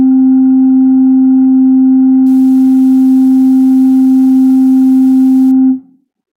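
From about 2.26 s to 5.51 s the music picks up sample clock jitter: the converter's clock wobbles, on the order of 10 microseconds, so each sample lands a touch early or late. Those timing slips turn into amplitude errors wherever the waveform is moving fast, sitting roughly 35 dB under the music. You hear it as a grainy hiss riding on loud, bright passages and dropping away when things go quiet.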